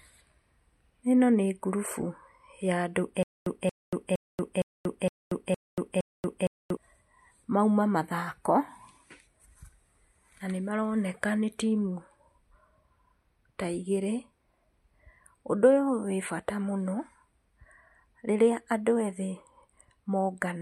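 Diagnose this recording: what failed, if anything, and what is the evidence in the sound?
There's a stutter with silent gaps from 3.23 to 6.77 s in this speech. The same 0.23 s burst of sound comes back seven times, each followed by about 0.23 s of dead digital silence, so it cycles evenly every 0.46 s. That points to the playback or stream stage, most likely a stalled buffer: each retry replays the last fragment it held, then runs dry. Whatever should have played during that stretch is gone.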